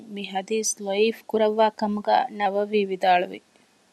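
A drift correction step hits this speech clip from 1.37 to 2.46 s: speed rises about 6.4% and pitch about 107 cents, roughly a semitone, then snaps back. This is likely clock-matching software abruptly changing playback rate to rebalance its buffer.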